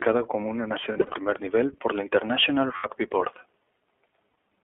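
From the start the speech carries iLBC codec coloration. The band stops near 3.4 kHz with little below 300 Hz, and vowels sound slightly rough and synthetic because each 20 ms frame's excitation is coded independently. The plainly audible grain points to iLBC's 15.2 kbps mode.

The first run of lost iLBC frames falls between 0.92 and 1.14 s, after "como una" and before "nivel por la". About 140 ms of audio is missing, scattered over 200 ms, with runs of up to roughly 70 ms. The decoder fills each hole by repeating the last pitch cycle with added noise, so the speech briefly becomes a held, faintly buzzy vowel. The same thing happens from 2.76 to 2.87 s, concealing about 80 ms, and again from 4.30 to 4.34 s for about 40 ms. Each time the speech recovers almost at once, because the frames that follow decode without depending on the lost ones.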